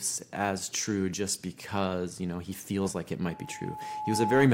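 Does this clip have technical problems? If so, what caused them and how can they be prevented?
Yes. The microphone was picking up the loudspeaker it was driving, and at 855 Hz the gain around that loop rose above one, so that frequency fed on itself. Right after "he feels like it", at 3.28 s, the result is loudspeaker feedback squeal: a single 855 Hz tone that swells over about a second and finishes roughly 5 dB louder than the speech, running until 4.53 s. To prevent it, lower the monitor gain or move the microphone away from and off-axis to the loudspeaker, and notch out 855 Hz.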